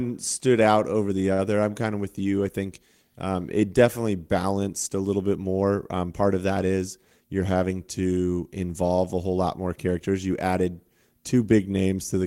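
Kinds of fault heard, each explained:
Short stall from a late packet: At 1.33 to 1.42 s a sound hangs on too long, stretched by about 52 ms. A packet arrived late and the jitter buffer ran dry, so the receiver held the last sound, then resumed exactly where it stopped, skipping nothing.
Jitter buffer speed-up: From 6.97 to 7.30 s the speech briefly hurries, running at about 115% speed with unchanged pitch. The buffer held more audio than it wanted, so the receiver trimmed short pitch-period slices in quick succession, cutting around 50 ms of delay.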